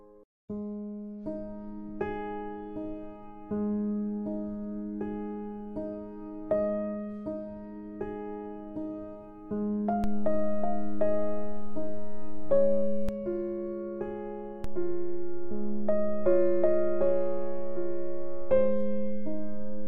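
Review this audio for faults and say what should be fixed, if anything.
A DC step shifts the waveform's zero line twice: at 10.04 s an offset of about -22 dBFS appears and holds until 13.09 s, then at 14.64 s a second offset of about -23 dBFS comes in and stays to the end. Each jump in the baseline, including the return at 13.09 s, is heard as a low thump or click while the audio itself carries on unchanged. Preventing it means blocking DC with a high-pass filter or coupling stage ahead of the converter and avoiding recalibration or input switching during recording.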